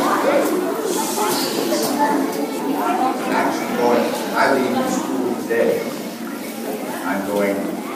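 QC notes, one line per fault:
No faults to note.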